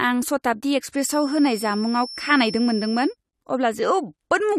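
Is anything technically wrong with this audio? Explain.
Yes. From 0.92 s to 3.17 s a feedback whistle sits behind the speech: a thin, steady tone at 5.4 kHz, about 15 dB below the speech level and swelling and fading slowly in loudness. The likely cause is a loudspeaker-to-microphone path whose loop gain has reached the edge of instability at that one frequency. The tone keeps recirculating and sustains itself without building into a runaway howl, and it ends at 3.17 s.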